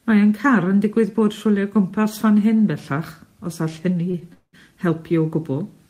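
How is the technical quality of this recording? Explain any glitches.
The speech has two network-related glitches close together near the end.

At 4.11 to 4.16 s there is a short stall from a late packet. A packet missed its playout time and the jitter buffer ran dry, so the receiver stretched the last sound by about 22 ms, then resumed where it left off. Nothing is lost, but the sound briefly hangs with a slight buzz or dip.

At 4.33 to 4.55 s there is a call audio freeze. The likely cause is packets held up in transit, emptying the jitter buffer. About 199 ms is filled, with a fading buzz or hiss that falls to about 60 ms of silence before the speech resumes where it stopped, now running later.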